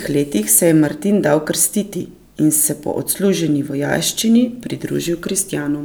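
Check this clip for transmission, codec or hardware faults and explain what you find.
Checking this clip turns up no faults to explain.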